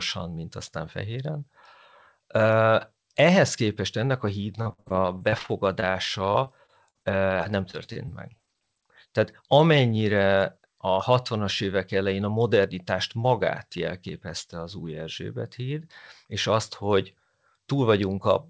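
Speech clip that's gone through a call path with nothing above 8 kHz, which fits a wideband codec like G.722. The main trouble is repeated packet loss, giving that robotic sound in two stretches. The first runs from 4.62 to 5.96 s, right after "képest ennek a". The second runs from 6.32 to 8.63 s. Each stretch has more than a dozen short holes, the longest 57 ms in the first and 45 ms in the second. The receiver papers over each gap by stretching out the last bit of sound, so it comes out choppy and synthetic with pieces missing. About a quarter of the first stretch is concealment, versus about 14% of the second. Then from 10.57 to 10.99 s there's a jitter buffer speed-up. The buffer had built up more audio than it wanted, so it trimmed roughly 40 ms by cutting out short pitch-period chunks in quick succession. That pushes playback to 108% speed with the pitch unchanged, fast enough to sound a bit hurried there.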